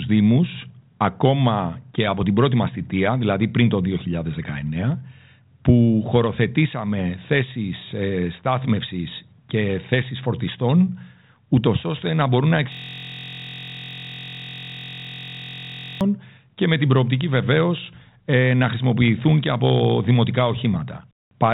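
From 12.72 to 16.01 s, after "ώστε να μπορούν να", a system hang loop repeats one 23.22 ms slice exactly, making a steady 43.1 Hz buzz rather than a stutter.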